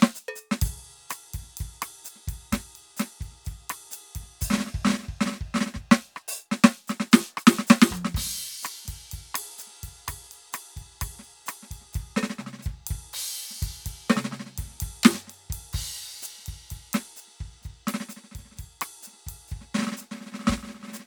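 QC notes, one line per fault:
No technical faults turn up anywhere in this music clip, and the signal holds steady with nothing breaking in on it.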